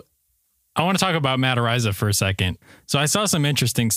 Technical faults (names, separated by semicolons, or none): none